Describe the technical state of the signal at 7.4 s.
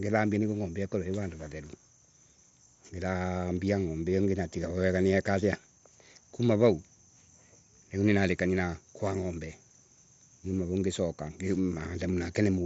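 At 7.4 s the speech is intact, carried over a Bluetooth mSBC headset link whose band stops near 7.7 kHz.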